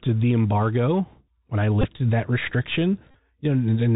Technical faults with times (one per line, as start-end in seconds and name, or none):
0.00-3.96 Bluetooth CVSD headset codec
1.81-1.85 Bluetooth headset packet repeated
3.11-3.15 Bluetooth headset packet repeated